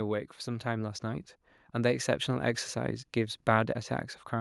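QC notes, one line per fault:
0.44–3.46 s, automatic gain rising: the speech and the room noise behind it swell together, slowly climbing about 6 dB over three seconds. The automatic gain control judged the input too quiet and raised its gain gradually, lifting everything at once.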